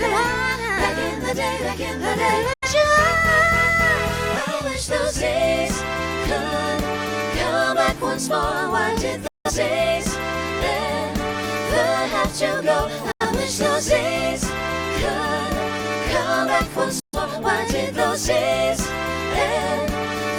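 Digital broadcast dropout: the receiver lost valid frames and muted, at 2.53–2.68, 9.27–9.51, 13.11–13.26 and 17.00–17.18 s. Each time the sound fades out over about 8 ms into silence, then resumes further on, the longest hole pointing to four lost frames.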